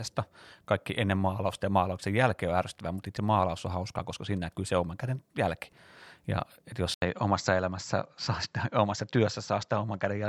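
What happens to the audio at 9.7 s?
The speech is within an input switched to a poorer device, from 6.94 s on, likely a microphone change: duller sound, spectrogram empty above 7.7 kHz, after an 80 ms waveform gap.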